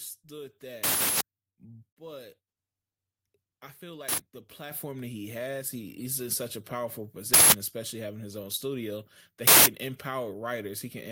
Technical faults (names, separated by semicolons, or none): microphone volume stepped up